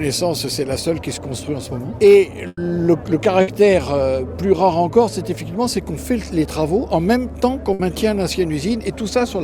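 The audio has three bursts of packet loss, at 2.47 to 2.60 s, 3.41 to 3.50 s and 7.73 to 7.82 s. At each, the sound just before the gap is stretched and faded over about 60 ms (100 ms in the first, which also ends in 20 ms of silence) and then resumes about 60 ms further on. Unlike a plain dropout, the gap is bridged rather than abruptly silent.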